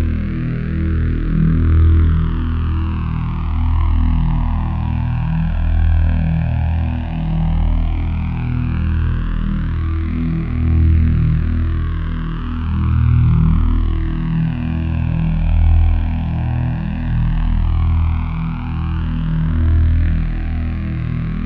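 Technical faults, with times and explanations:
12.93 s, dropped samples: a sharp single click where likely a handful of samples, about 0.1 ms, went missing, so the waveform jumps abruptly; spectrogram shows a thin vertical line.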